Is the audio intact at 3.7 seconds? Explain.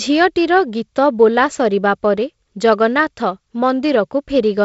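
Yes, the audio is intact at 3.7 seconds, with the speech carried normally through G.722 wideband telephone coding.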